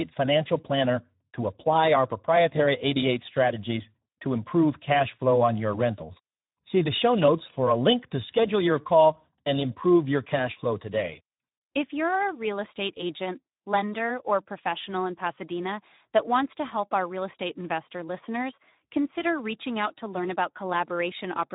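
Speech encoded with the Speex codec at a low quality setting, consistent with about 11 kbps, leaves the CELP excitation starved of bits, making the voice audibly hoarse and noisy throughout.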